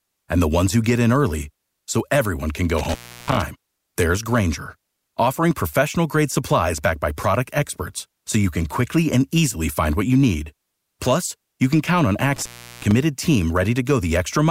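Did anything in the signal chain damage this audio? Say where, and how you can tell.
Yes: intermittent contact in the analogue wiring. The speech drops out with edge crackle after "so everyone can go" (2.78–3.42 s) and "you can count on" (12.36–12.92 s), a loose connection opening for about 0.34 and 0.37 s.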